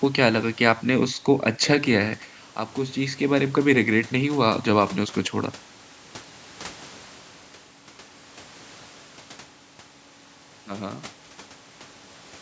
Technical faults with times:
none

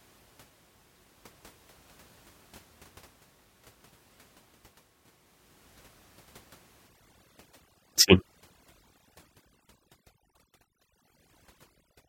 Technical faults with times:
6.87-12.09 overdone noise removal

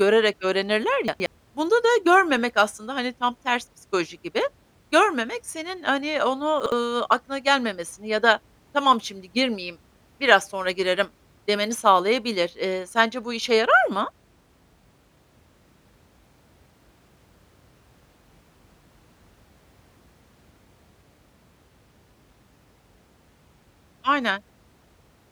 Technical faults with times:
1.08-1.26 chunks out of order
6.60-6.72 chunks out of order

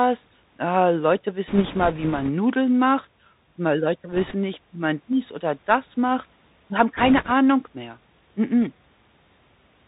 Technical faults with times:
0.00-9.87 Bluetooth CVSD headset codec
1.47-2.30 bit errors on a Bluetooth voice link
4.12-4.35 bit errors on a Bluetooth voice link
5.13 dropped samples
6.97-7.31 bit errors on a Bluetooth voice link

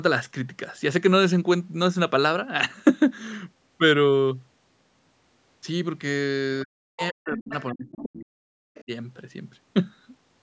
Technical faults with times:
6.64-8.90 speech suppressed in double talk
6.97-7.07 other side's voice leaking through
7.99-8.09 other side's voice leaking through
8.75-8.84 other side's voice leaking through

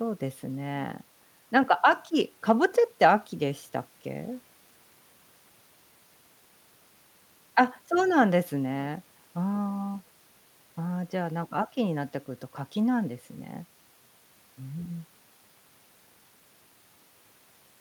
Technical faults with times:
none

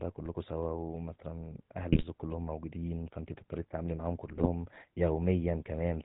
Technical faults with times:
0.00-6.04 GSM full-rate codec
1.92-2.04 GSM bit errors
4.27-4.49 GSM bit errors

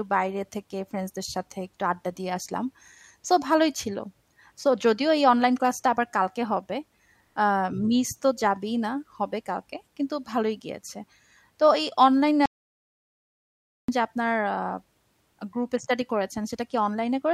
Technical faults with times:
12.46-13.88 audio dropout to silence

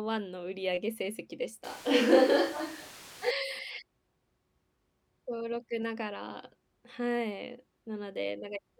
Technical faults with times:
1.64-3.31 switch to a distant microphone

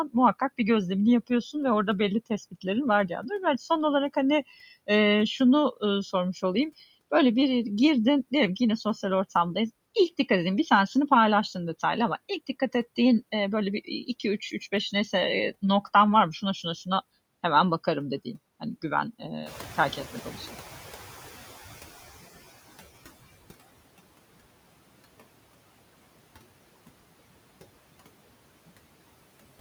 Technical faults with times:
0.00-29.60 noise suppressor artifacts
19.45-23.46 noise suppressor catching up

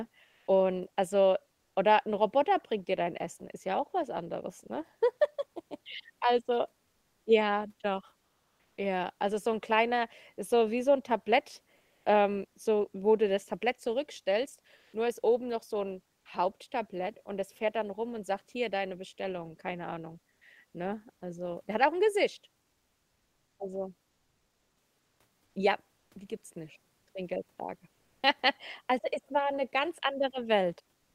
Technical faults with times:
0.25-0.43 comfort noise in place of the background
8.23-8.77 comfort noise in place of the background
11.77-12.01 comfort noise in place of the background
14.77-14.89 comfort noise in place of the background
24.13-25.15 comfort noise in place of the background
25.99-26.11 comfort noise in place of the background
27.97-28.21 comfort noise in place of the background
31.03-31.14 comfort noise in place of the background

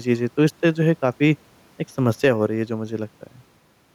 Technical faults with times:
0.00-3.95 gain pumping

